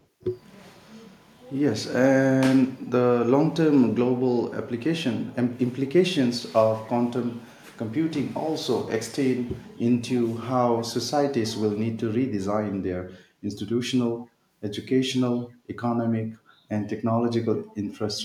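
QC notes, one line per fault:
0.00–0.06 s: echo leak. A faint, brief scrap of delayed speech sits about 40 dB below the main speech, trailing it by 243 ms. The likely cause is a far-end loudspeaker feeding its microphone, with the echo canceller letting a remnant through.
14.21–14.27 s: echo leak. Another short delayed copy, again 243 ms behind, now louder at about 30 dB below the speech. The same delay points to the same acoustic return path.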